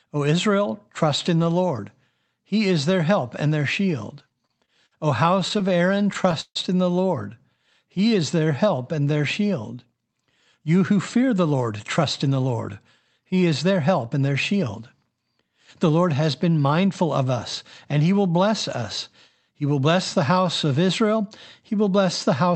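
Repeated stalls (stutter) break up this speech recording from 4.29 to 4.93 s, just after "help and their shield", and from 5.40 to 6.57 s, just before "in the". Packets arrived late, so the jitter buffer kept running dry, and the receiver stretched the last sound to bridge the gaps: five brief holds totalling 119 ms in the first stretch and twelve totalling 254 ms in the second, the longest lasting 147 ms. Nothing is lost, but the delivery drags and stammers. A jitter buffer slow-down follows from 7.84 to 9.18 s. The receiver repeated single pitch periods to rebuild its reserve, adding 162 ms and running the speech at 88% of its normal rate with the pitch unchanged, so sounds are audibly drawn out. Jitter buffer speed-up then occurs from 11.16 to 12.69 s and again from 13.18 to 15.11 s. With too much audio queued, the receiver removed short pitch-period pieces, about 150 ms in each stretch, so the speech runs at 108% speed, hurried but at the same pitch. 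Throughout, the call path's Opus coding limits the sound to 8 kHz, giving it a narrowed top end.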